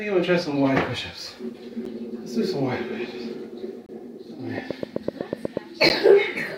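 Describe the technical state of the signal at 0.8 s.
At 0.8 s the signal is intact, with no audible fault at that moment.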